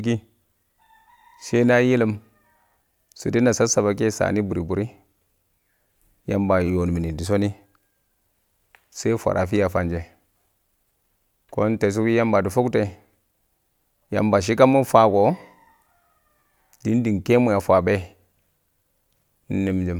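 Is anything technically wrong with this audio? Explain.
No, I hear no technical faults in this recording.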